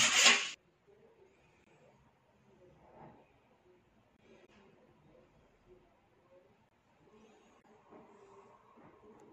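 Short holes break the audio at 1.64, 4.17 and 6.69 s, each about 23 ms long and spaced 2.5 s apart. That regular spacing marks a gap between chunks: silence left at each join between 2.5 s blocks, with nothing lost. Two brief glitches, from 4.42 to 4.49 s and from 7.58 to 7.65 s, come from damaged data in a compressed stream. Corrupted bytes make the decoder misread frames and lose sync until it finds the next valid header.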